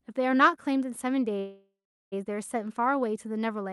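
A call audio freeze runs from 1.39 s to 2.14 s in this speech recording. The sound stalls and the last fragment is stretched into a buzzy tail that fades, with about 0.38 s of it dropping to silence, before the speech resumes exactly where it stopped. The likely cause is packets held up in transit, draining the jitter buffer so the receiver had to fill about 0.72 s on its own. Nothing is lost, but everything after the gap arrives about 0.72 s later, all through a call codec whose top end stops near 12 kHz, consistent with Opus.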